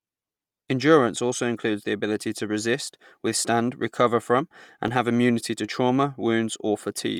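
Right through the speech there's a plainly audible breathy, grainy edge, likely Bluetooth LC3 compression, with the grain pointing to around 48 kbps in 10 ms frames, and the band still reaching about 20.2 kHz. At 4.88 s, between "resist withstand recover from" and "have immunity to trauma", there's a block of digital silence, a 2.67 ms hard dropout that fits a 128-sample unfilled buffer, heard as a quick tick.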